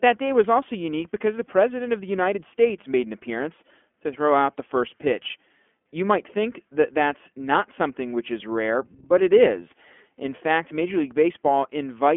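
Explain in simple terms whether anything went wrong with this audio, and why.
The whole recording went through the iLBC codec, a phone-call codec that squeezes the speech into narrow 20 ms chunks and drops everything above about 3.6 kHz, so it sounds thin and a bit robotic.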